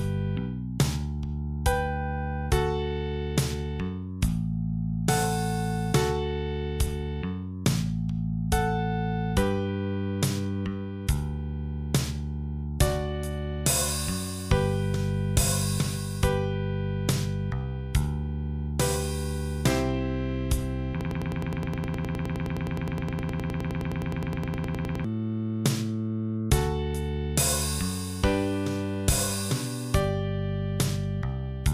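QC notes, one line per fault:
21.01 to 25.05 s, broken-record loop: a short fragment of about 104 ms repeats exactly, back to back, 39 times, producing a rapid mechanical stutter of roughly ten cycles per second that runs for about 4 s before normal playback resumes. Whatever should have sounded in those four seconds is missing. The likely cause is a player, encoder or stream stalling and resending the last chunk it held, which fits a small buffer replaying until data arrived again.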